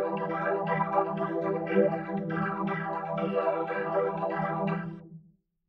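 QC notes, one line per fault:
No faults found. Nothing in the clip calls for a QC entry.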